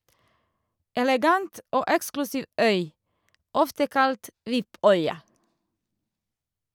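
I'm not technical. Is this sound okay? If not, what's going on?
Yes, this sounds okay. Nothing in this speech recording stands out as a technical problem.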